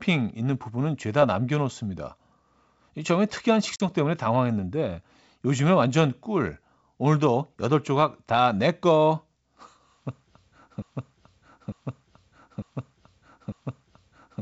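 At 3.76 to 3.84 s comes packet loss on an ADPCM call. A couple of packets drop to a hard-edged silence. The decoder's predictor loses track, so speech returns with brief distortion.

From 10.82 s to the end, a broken-record loop repeats one 0.90 s fragment four times back to back. A stalled stream is the likely cause, and the intended audio is lost.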